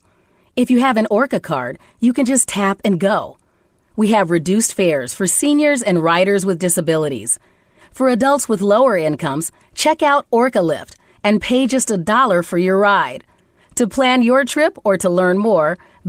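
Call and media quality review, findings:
No faults found in the speech. Opus voice compression at 20 kbps in hybrid mode keeps the full band, with only light coding texture audible.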